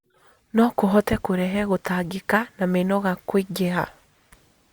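Speech recording in which no technical faults can be heard at any point in the signal.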